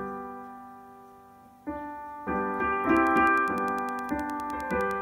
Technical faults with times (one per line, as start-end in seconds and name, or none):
2.89-5.02 Wi-Fi interference